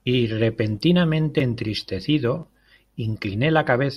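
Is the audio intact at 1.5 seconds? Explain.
Yes, at 1.5 seconds the speech runs through intact, with no dropout, click, distortion or other fault at that moment.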